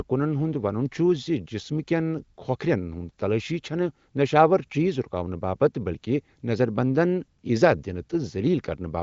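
Nothing goes wrong anywhere in this stretch of speech, and the way the highs stop at about 7.5 kHz simply reflects the AMR wideband (HD Voice) codec it was carried over, which sounds like it was running at around 23.05 kbit/s.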